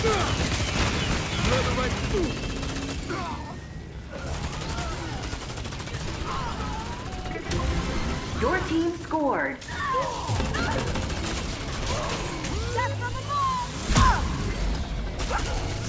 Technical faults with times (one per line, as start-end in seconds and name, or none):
none